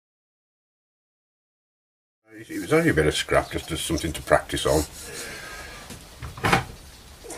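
No technical faults can be heard anywhere in the audio. The level rises in a smooth fade-in from around 2 s to 3.1 s, with no click or hard edge.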